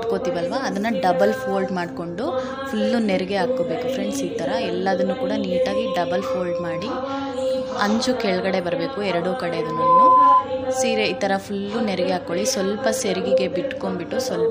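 From 9.57 to 10.47 s, a microphone picked up the loudspeaker it was feeding, and the loop gain passed one at 1 kHz. This loudspeaker feedback squeal swells over just under half a second into a piercing tone roughly 10 dB louder than the surrounding sound.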